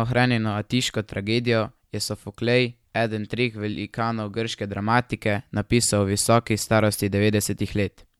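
No technical faults are audible anywhere in the speech.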